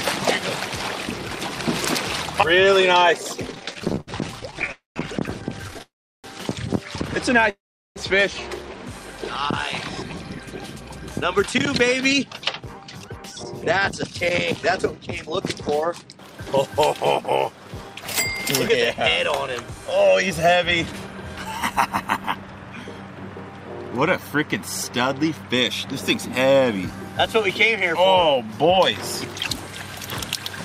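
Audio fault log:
3.47–5.82 s, repeated stalls (stutter): 29 short gaps, longest 67 ms, each filled by stretching the last sound; audio drags, waveform shows small repeated smeared patches.
4.72–4.98 s, 5.82–6.26 s, 7.50–7.98 s, call audio freeze: gaps of 0.24, 0.42 and 0.46 s, likely late packets, filled with fading buzz then silence; spectrogram shows smeared bands ending in blank columns.
9.89–15.62 s, 18.92–22.93 s, 27.13–30.59 s, jitter buffer speed-up: pitch periods removed to shed backlog, about half a second, then about 0.3 s, then very little; runs 8%, 8%, 1% faster at unchanged pitch, spectrogram compressed in time without shift.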